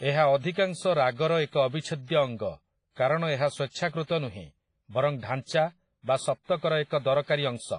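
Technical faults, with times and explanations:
Throughout, WMA compression: the speech sounds ringing and washy, with a hiss that swells and fades with the signal, and nothing above about 10.5 kHz. This is likely heavy transform coding, consistent with roughly 24 kbps, smearing quantisation noise across long blocks and discarding weak detail.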